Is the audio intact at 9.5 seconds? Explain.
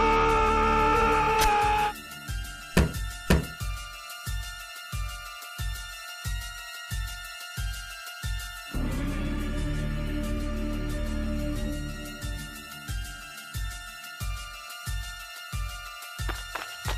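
Yes, the audio is intact at 9.5 seconds, with no dropout, click, distortion or other fault at that moment.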